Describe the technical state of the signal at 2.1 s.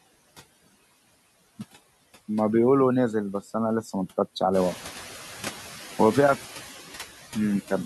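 At 2.1 s the background hush sinks in the gaps between speech and comes back up underneath it. This is noise suppressor artifacts, present throughout the clip: the suppressor pulls down bands it treats as steady noise, frame by frame, cutting that noise by about 13 dB.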